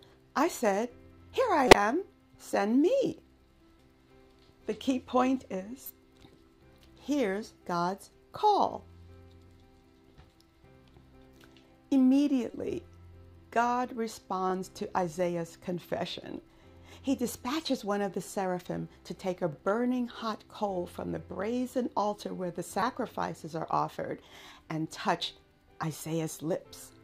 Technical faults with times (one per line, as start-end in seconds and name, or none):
1.68-1.75 corrupt frame decoded
4.46-4.48 overlapping chunks
5.83-5.90 corrupt frame decoded
9.48-9.50 overlapping chunks
12.51-12.54 corrupt frame decoded
14.50-14.52 overlapping chunks
19.52-19.55 overlapping chunks
22.80-22.82 corrupt frame decoded
24.55-24.57 overlapping chunks